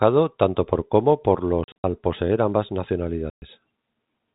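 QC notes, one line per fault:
1.64–1.84 s, packet loss filled with silence: after "tanto por como por", before "poseer ambas", about 140 ms of audio drops out in holes spread over 200 ms (longest 60 ms). The gaps fit 20 ms packets, and they have hard edges within the 4 kHz-limited G.711 telephone band.
3.30–3.42 s, packet loss filled with silence: about 120 ms replaced by digital silence, again consistent with lost 20 ms packets, with abrupt cut-in and cut-out.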